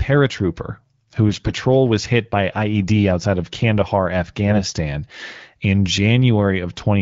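From 1.29 to 1.51 s, just before "was hit by", the speech turns hoarse and gargly while keeping its pitch and loudness. A shorter scratchy patch follows at 4.48 to 4.56 s. These are AMR bit errors: around a tenth of the weakly protected bits in the affected frames arrived flipped, so pulse positions and fine gain, pitch and spectral values decode wrongly. The first patch fits about eleven 20 ms frames. The surrounding wideband speech, which points to AMR-WB near 12.65 kbit/s, shows only light coding roughness.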